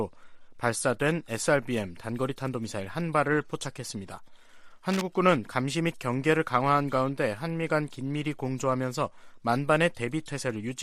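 From 4.86 to 5.02 s, a burst of cable scratch noise sits over the sound for about 0.16 s, only a little quieter than the sound itself. It is a dense, uneven rasp, most likely from a worn cable, connector or control being moved so that its contact resistance jumped about. Unlike a single digital click or regularly spaced crackle, it is a tight cluster of irregular noise that rustles and then stops.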